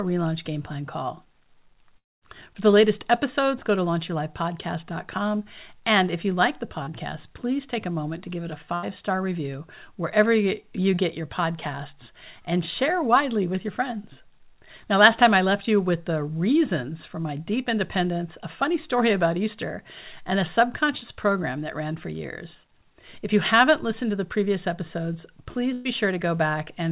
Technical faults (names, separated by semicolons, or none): long network dropout; short concealed packet loss; burst of packet loss